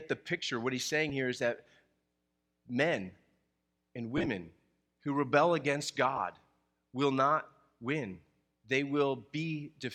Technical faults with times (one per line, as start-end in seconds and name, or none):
1.09 lost LE Audio frames
4.17-4.27 lost LE Audio frames
6.16 lost LE Audio frames